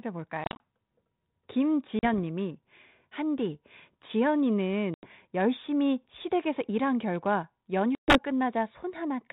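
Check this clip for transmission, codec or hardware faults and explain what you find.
The clip has packet loss on an ADPCM call, in four places. The first is 0.44 to 0.63 s, where about 110 ms goes missing in short gaps, the longest 40 ms. The others are at 1.99 to 2.19 s (40 ms lost), 4.94 to 5.08 s (90 ms) and 7.95 to 8.18 s (130 ms). Lost packets become hard-edged silence. The decoder's predictor and step size then disagree with the sender's. So the speech returns slightly distorted, settling within tens of milliseconds. Under it sits the light, band-limited grain of G.726, which sounds like a 32 kbit/s rate.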